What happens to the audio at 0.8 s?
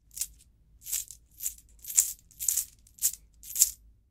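Nothing goes wrong at 0.8 s; the sound continues intact through that moment, with no dropout, click, distortion or other fault to be heard.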